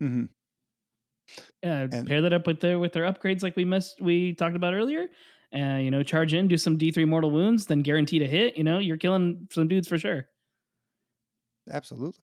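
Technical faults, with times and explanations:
No technical faults are audible.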